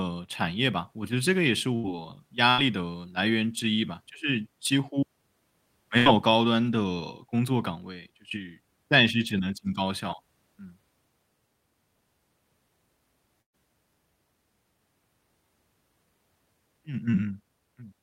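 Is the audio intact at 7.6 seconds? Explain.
Yes, at 7.6 seconds the speech runs intact, with no audible fault at that point.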